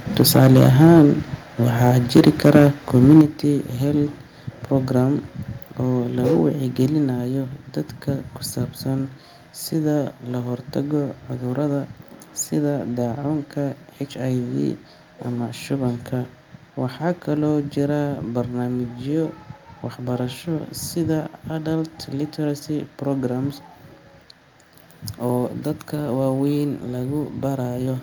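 Harsh, crackling distortion rides on the loudest syllables of this speech from 0.2 to 1.02 s, 1.84 to 2.68 s and 2.95 to 3.21 s. This is microphone overload, likely from input gain set too high. The peaks run about 6, 5 and 3 dB past the converter's ceiling, and a few percent of samples have their tops sheared flat. At 3.21 s, right after the last distorted stretch, voice and background together drop by about 7 dB in a single step. That is the microphone volume being stepped down, likely by the call software reacting to the clipping and cutting the device's input level at once.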